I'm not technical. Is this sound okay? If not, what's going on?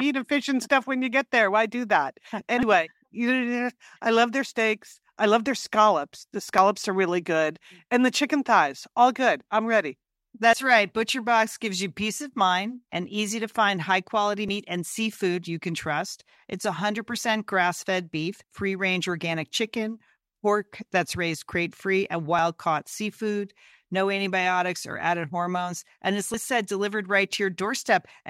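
No. The speech skips briefly at 2.63, 6.58, 10.53, 14.49, 22.39 and 26.34 seconds. About a twentieth of a second vanishes each time. This is audio missing between chunks, likely from a recorder saving in 4-second pieces and dropping sound at each join.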